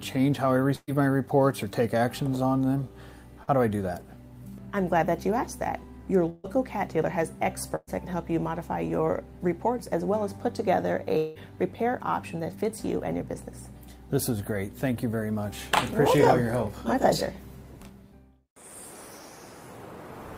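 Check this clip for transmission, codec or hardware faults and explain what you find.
The clip has network transmission faults: three bursts of packet loss, one short concealed packet loss and one probable long network dropout.

Burst of packet loss, at 0.75–0.89 s, 6.29–6.46 s and 7.76–7.89 s: consecutive packets failed to arrive in time. The receiver extended the preceding sound for about 120 ms, 144 ms and 115 ms, fading it out into a held buzz or thinning hiss. Gaps of roughly 120–140 ms of audio are lost each time. The first burst ends in about 30 ms of silence and the third in about 10 ms before the sound resumes further along.

Short concealed packet loss, at 3.43–3.49 s: about 40 ms of audio never reached the decoder. The receiver patched the hole with 38 ms synthesised from the sound just before it, then cross-faded back into the real signal. The result is a brief smear or wobble where a small slice of sound is missing.

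At 11.17–11.37 s, audio stops arriving for about 180 ms, likely a long network dropout. The receiver continues the last sound for about 181 ms as a decaying buzz or hiss. There is no silence before the sound returns, and the intervening 180 ms of content is absent.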